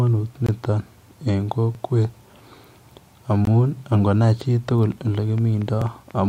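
At 0.46 to 0.49 s the speech drops out for about 21 ms, a block of digital silence that fits a 1024-sample buffer not being filled in time. The cut to zero and back has no fade, so you hear a little tick-like hole. The same thing happens again at 3.45 s, just under 20 ms.

At 1.75 s there's a stutter from overlapping chunks. The audio was handled in 2 s chunks, and the next one starts about 23 ms early, so that slice plays twice at the join. It recurs at 5.82 s, about 4 s later, two chunks on.

From 4.92 s to the end there's a train of clicks, regular at about 4.3 per second and roughly as loud as the speech itself. They tick away steadily over the sound, likely interference from nearby equipment or a faulty connection or power supply.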